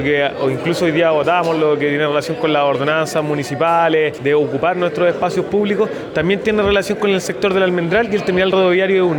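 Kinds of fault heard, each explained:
Imaging from linear upsampling: Straight-line interpolation, which fits a rise from 24 kHz, dulls the top. Faint mirrored copies between 12 and 24 kHz, roughly 40 dB down, add metallic shimmer.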